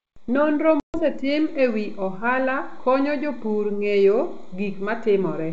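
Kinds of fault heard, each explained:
Packet loss on an ADPCM call: a hard-edged gap of silence opens in the speech between about 0.80 and 0.98 s, about 140 ms of audio missing, roughly seven packets' worth. When the sound comes back it is slightly distorted before settling over some tens of milliseconds. The decoder's adaptive predictor and step size drifted away from the sender's during the missing packets and needed time to realign.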